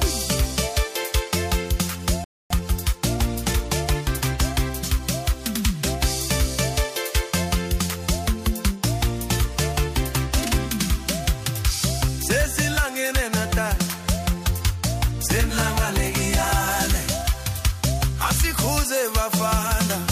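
The audio has a playback stall at 2.24 s. The sound cuts to silence for about 260 ms and resumes at 2.50 s, likely because the player ran short of data. Time-compressed catch-up follows from 2.50 to 5.12 s. The player clears its backlog by trimming and cross-fading tiny pieces. The sound runs about 1.1 times fast at normal pitch.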